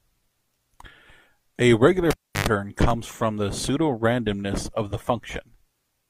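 At 2.1 s the speech is cut by a cable pulled and plugged in. A live lead comes out of its socket with a pop. The sound then drops to near silence for about 330 ms. As the plug goes back in, only its tip touches at first. That gives a burst of 50 Hz mains buzz lasting about 110 ms. A second pop follows as the full signal returns at 2.49 s.

At 2.90 s there is a brief stutter from overlapping chunks. The audio was handled in pieces about 2 s long. Here a new piece began before the previous one had finished. So a sliver of about 7 ms is played twice at the join. It is too short to hear as an echo. Instead it comes across as a small click or hiccup in the speech.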